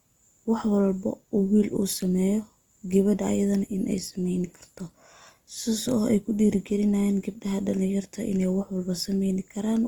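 Throughout, the speech sounds rough, grainy and noisy, likely Opus compression in music mode, filling bit-starved bands with noise at around 24 kbps.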